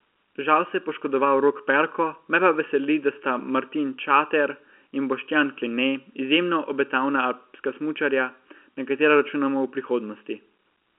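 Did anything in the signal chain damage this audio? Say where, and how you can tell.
Yes. Channel delay (comb filtering) runs throughout: one channel lags the other by well under a millisecond, likely at a mono downmix, before the two are summed. The speech sounds hollow, and a spectrogram shows fixed dark horizontal notches, the first around 700 Hz, repeating evenly upward.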